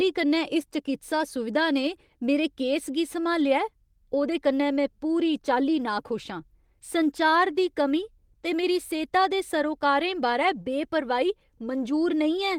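No technical faults can be heard in this speech.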